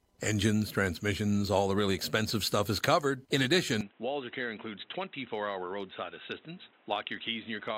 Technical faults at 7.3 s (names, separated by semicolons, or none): input switched to a poorer device